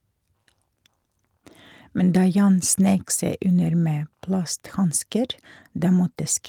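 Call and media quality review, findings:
Nothing to flag here; the speech comes through steady and even the whole way, with no dropouts, glitches or odd artefacts to chase down.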